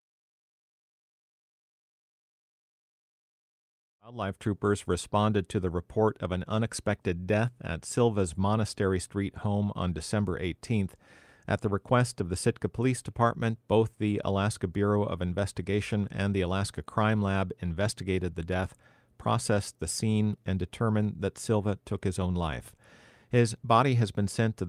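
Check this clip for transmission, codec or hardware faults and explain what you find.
No transmission, codec or hardware faults are audible in the speech. The smooth fade-in near the start rises evenly from around 4 s to full level by 4.57 s, with no click or hard edge.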